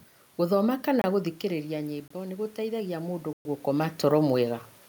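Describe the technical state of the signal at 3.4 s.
At 3.4 s you're right inside a block of digital silence running from 3.33 to 3.45 s, a 120 ms hole where the sound simply stops. The likely culprit is the program not filling its output buffer in time. There's no fade either way, so the audio chops off hard and comes back hard. At that length it sounds like a brief dropout rather than a single tick.

Underneath that, the automatic gain is rising. It runs from about 1.15 s to 4.66 s and climbs about 4 dB in total. The input had fallen by about 9 dB, and the gain control is slowly working to make up for it. Because it lifts everything together, the voice and the room noise swell up gradually around the gap, rather than the voice alone getting louder.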